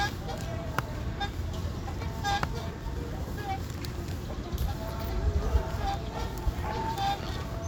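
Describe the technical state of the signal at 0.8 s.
At 0.8 s the signal is intact, with no dropout, clipping, glitch or other fault audible at that moment.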